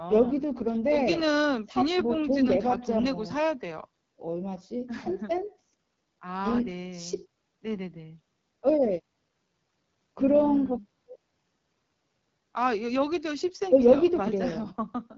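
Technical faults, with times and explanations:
Throughout, AMR wideband (HD Voice) codec: the speech sounds rough and raspy, consistent with one of the codec's lowest rates, around 8.85 kbit/s. Its pulse-driven vocal tract model codes speech only up to 6.4 kHz, and the band above it is only shaped noise.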